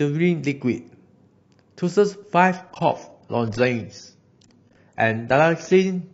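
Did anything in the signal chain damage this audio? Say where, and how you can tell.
Yes. An adaptive stream dropped to a lower bitrate at 2.56 s and stayed there to the end. Codec artefacts suddenly thicken with no gap, which fits the network forcing a switch from roughly 96 to 24 kbit/s AAC.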